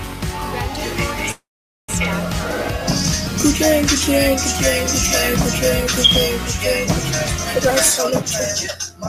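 At 1.31 s the audio stops dead and the last sound lingers as a brief fading buzz, then drops to near silence for roughly half a second before resuming at 1.91 s. This is a call audio freeze, likely caused by packets stalling in transit so the jitter buffer emptied. The receiver filled about 570 ms with the fading continuation, and nothing was lost. From 7.60 s to 8.97 s the audio sounds hurried, running at about 125% speed with unchanged pitch. This is a jitter buffer speed-up: the buffer had built up excess delay, so the receiver trimmed repeated pitch-period-length slices, cutting out around 0.4 s in total to catch up.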